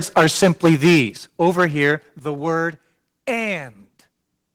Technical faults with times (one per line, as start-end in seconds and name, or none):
0.17-1.01 microphone overload
0.18 microphone volume stepped down
1.17 microphone volume stepped down
1.42-1.91 microphone overload
2.19 microphone volume stepped down